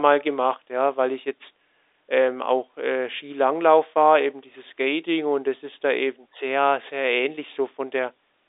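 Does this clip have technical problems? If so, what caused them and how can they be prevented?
No, there's nothing here to fix: this is speech carried over an ordinary G.711 telephone line, so the narrow phone-band sound is simply how that kind of line works.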